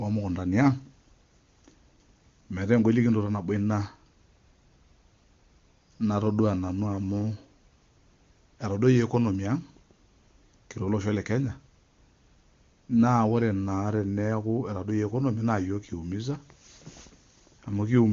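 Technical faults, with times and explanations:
No technical faults to report: the speech carries the AMR wideband (HD Voice) codec's band limit, with nothing above about 7.1 kHz, and its clarity fits the codec's top rate of around 23.85 kbit/s.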